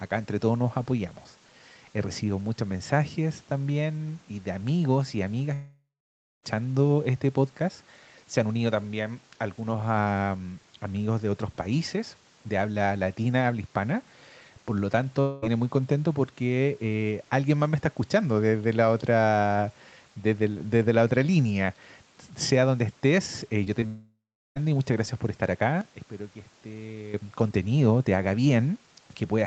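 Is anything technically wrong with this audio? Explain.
Yes, the speech has three kinds of fault.

Long network dropout (likely cause): at 5.53–6.45 s, about 0.9 s of audio is lost. A fading buzz bridges the first part, then about 0.56 s is silent. At 15.21–15.44 s, about 0.22 s is lost and filled by the synthesized tail with no silence. At 23.86–24.58 s, about 0.7 s is lost, leaving about 0.36 s of silence. In each case the receiver kept extending the last sound as it faded. On a spectrogram this shows as smeared, decaying energy followed by a blank gap, and the waveform flattens there.

Short concealed packet loss: at 23.64–23.68 s and 23.80–23.84 s, about 20 ms is missing each time. The receiver patched each hole with continued sound, heard as a brief smear or wobble just before the longer dropout. On a spectrogram each patch is a narrow vertical band of blurred, repeated texture.

Sudden gain jump: from 25.81 to 27.14 s, the level drops by about 12 dB. 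A digital gain change applied without a ramp is the likely cause. Speech and background noise drop together, which shows as an abrupt step in the waveform envelope and a uniformly dimmer spectrogram across that span.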